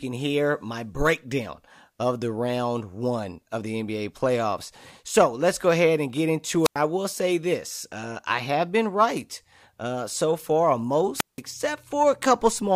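At 6.63 and 11.15 s, wireless microphone squelch dropouts: a fading radio link trips the receiver's squelch, bringing brief hiss, then 94 and 174 ms mutes, flat-lined waveform, blank spectrogram.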